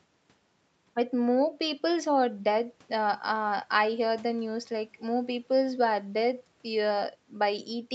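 No technical faults can be heard in this speech.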